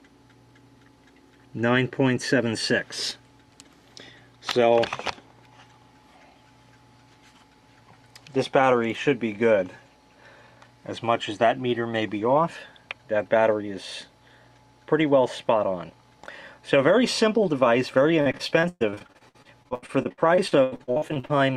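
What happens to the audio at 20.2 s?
At 20.2 s the audio is inside a stretch of repeated packet loss (robotic sound), running from 18.21 to 21.31 s. Some 32 gaps, the longest 118 ms, are patched by extending the preceding sound, about 35% of the span, giving choppy audio with pieces missing rather than one clean dropout.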